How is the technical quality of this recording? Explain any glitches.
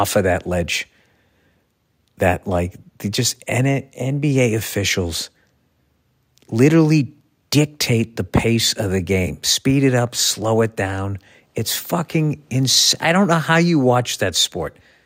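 No glitches or technical faults can be heard here.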